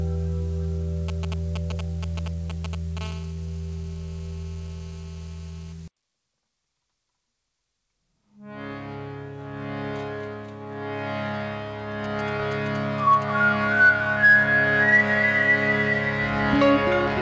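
From 1.09 to 2.99 s, GSM signalling bursts from a nearby 2G phone break in as a galloping dit-dit-dit of short 217 Hz buzzes, nearly as loud as the sound itself. The clusters tell it apart from the continuous buzz that follows. From 3.01 to 5.73 s, a 2G phone in a call produces GSM phone buzz, a steady, raspy 217 Hz drone rich in harmonics at about 22 dB below the signal. It is continuous rather than intermittent, unlike the bursts. The audio circuit rectifies the radio pulses in both faults. Across the clip the band stops at 8 kHz, which fits the G.722 codec on the call path.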